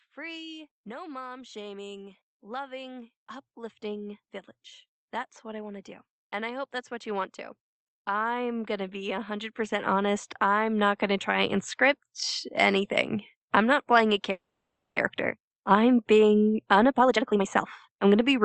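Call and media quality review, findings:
Automatic gain rising, 0.14–4.25 s and 8.06–13.85 s: AGC raised gain gradually, by about 8 dB and then about 11 dB, speech and background swelling together until "playing a".

Call audio freeze, 14.31–14.98 s, right after "playing a": last sound extended as a fading buzz, then about 0.5 s silence; audio resumes where it stopped, nothing lost. Likely jitter buffer underrun from delayed packets.

Jitter buffer speed-up, 16.54–18.39 s: receiver trimming pitch-period fragments to drain excess buffered delay, roughly half a second removed; speech runs at 131% speed, same pitch, sounds hurried.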